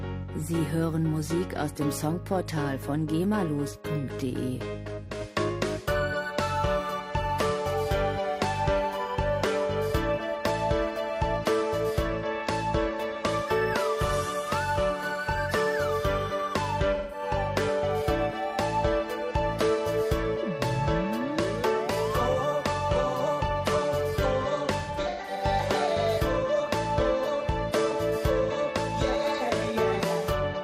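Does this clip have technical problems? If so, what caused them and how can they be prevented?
Yes, there's AAC frame loss with concealment at 5.04–5.10 s, 16.95–17.23 s and 24.80–25.43 s. The decoder papered over missing frames by reusing the last good spectrum, so you hear smeared, phasey patches. The last one is scattered dropouts, the longest run about a tenth of a second. Adding FEC or retransmission on the link should prevent it.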